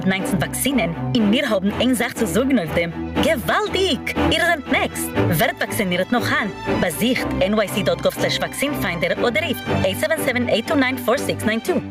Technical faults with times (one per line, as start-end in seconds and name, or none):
0.00-11.90 gain pumping